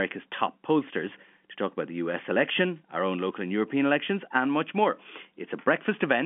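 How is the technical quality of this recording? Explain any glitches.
Nothing stood out on listening to this telephone-band speech recording; there are no glitches to explain.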